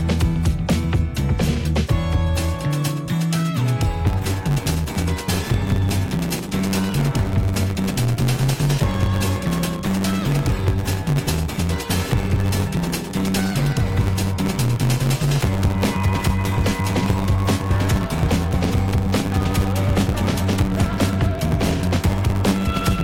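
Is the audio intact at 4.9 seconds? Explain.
No. From about 4.05 s to the end of the clip, there's a block size mismatch (truncated). One stage hands over longer blocks than the next one reads, so the tail of each block gets thrown away, which fits 512-sample blocks being written. You hear that chopping as a 100 Hz buzz, and because chunks keep disappearing, the sound runs about 1.16 times fast while staying close to its normal pitch.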